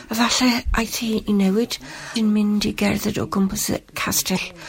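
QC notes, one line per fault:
2.13–2.17 s and 4.33–4.37 s, damaged data in a compressed stream: two brief 40 ms glitches break into the speech, where corrupted bytes in the encoded stream leave the decoder misreading frames and hunting for the next valid header before output resumes. On a spectrogram each shows as a narrow vertical break unrelated to the surrounding harmonics; on the waveform, a short disruption with abrupt edges that doesn't follow the speech envelope.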